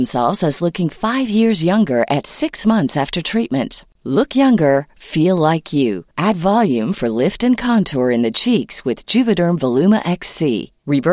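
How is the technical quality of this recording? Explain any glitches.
Nothing in this speech recording comes across as a glitch, so there's happily nothing here that needs explaining.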